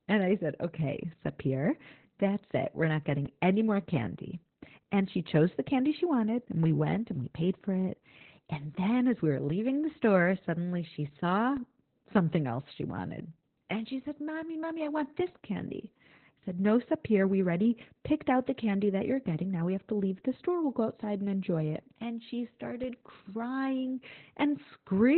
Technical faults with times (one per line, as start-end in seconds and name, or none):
0.00-25.17 Opus voice compression